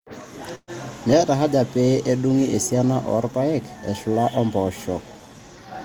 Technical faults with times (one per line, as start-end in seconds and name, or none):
0.55-0.70 burst of packet loss